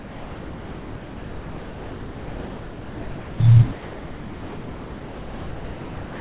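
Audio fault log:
0.0–3.4 s and 3.73–6.17 s, sound dropped by the voice detector: the sender's voice detector likely mistook the speech for background and stopped transmitting, so the receiver substituted comfort noise. Both stretches become steady, featureless hiss, with real speech surfacing only briefly between 3.4 and 3.73 s.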